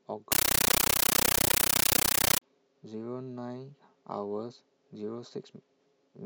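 Speech, with a compressed stream played as audio from 0.32 to 2.42 s: loud static chattering at 31.25 Hz in 13.3 ms bursts, consistent with undecoded AC-3 data treated as samples.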